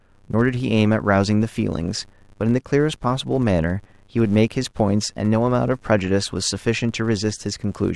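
A speech recording with a filter restarted on every block throughout. Each block starts from silence, leaving a 100 Hz buzz that tracks the speech level, consistent with 10 ms blocks.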